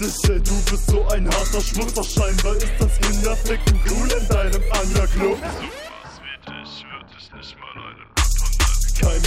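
No technical faults are audible anywhere here.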